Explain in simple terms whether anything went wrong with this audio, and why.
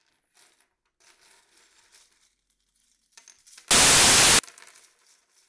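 From 3.71 to 4.39 s, the sound is replaced by a burst of loud, even hiss that starts and stops abruptly. This is file tags played as audio: the player read the file's embedded cover picture as sound. Unlike crackle or distortion, it isn't tied to the original sound.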